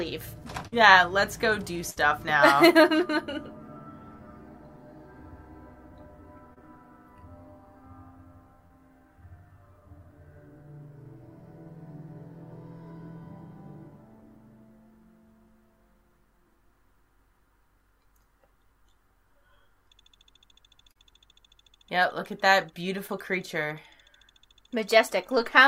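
At 0.67 to 0.74 s and again at 1.90 to 1.98 s, a burst of packet loss drops about 40 ms and then 60 ms of audio. The receiver stretches the last sound for roughly 46 and 57 ms as a fading hold, then jumps ahead, so something is skipped.

Short concealed packet loss follows at 6.54 to 6.61 s, 8.67 to 8.72 s, 20.92 to 20.97 s and 23.07 to 23.11 s. Each loses only 20 to 40 ms, which is briefly filled and blended back, giving a quick smear or wobble rather than an audible hold and jump.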